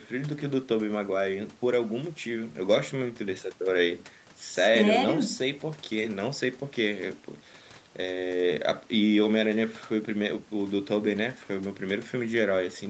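No technical faults can be heard in this speech; the sound carries nothing above about 8 kHz and has the light coding texture of a wideband call, which fits a normal Opus call path with standard microphone processing.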